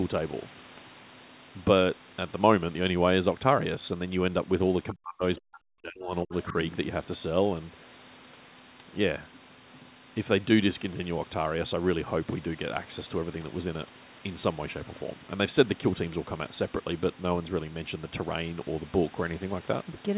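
Speech over a narrowband call path, band-limited to 4 kHz as fits G.711 A-law; between 4.93 and 6.33 s, and briefly at 6.50–6.55 s, the voice drops out by up to about 40 dB, likely speech suppressed in double talk by the echo canceller.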